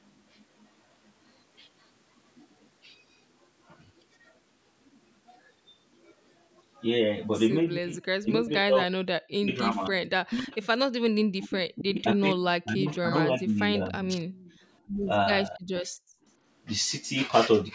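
From 7.78 to 8.93 s, 9.39 to 10.72 s and 11.34 to 14.1 s, the speech is most likely being suppressed in double talk. The echo canceller appears unable to tell the near talker from loudspeaker echo while both ends are active, so it pulls everything down. The voice is pulled down, losing roughly 40 dB in the first two stretches and around 25 dB in the longer third one, with roughly 0.7, 1.0 and 1.5 s of audio affected respectively.

Inside that third stretch, at 12.89 to 12.99 s, and again just after it, from 14.33 to 14.58 s, a faint echo leak appears. This is likely residual loudspeaker pickup that the canceller failed to remove. It comes back as a delayed copy trailing the original by 276 ms, sitting about 30 dB below the speech. It is heard as brief, quiet scraps rather than a full repeat.

At 14.81 to 14.96 s the background is gated by the echo canceller. The canceller clamps the microphone while the loudspeaker plays, so the room sound dips by about 12 dB for 150 ms and then returns.

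At 15.55 to 15.74 s, speech is suppressed in double talk once more, dropping out for a moment by roughly 40 dB.

From 16.02 to 16.24 s the background is gated again, this time hard, by about 35 dB, so the room tone nearly vanishes before coming back.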